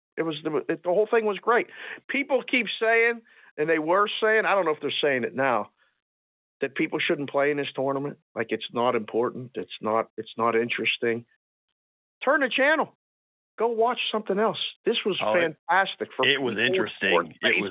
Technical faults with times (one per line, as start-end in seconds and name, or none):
none